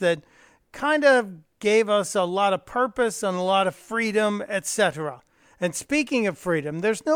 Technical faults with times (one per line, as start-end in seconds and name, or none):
none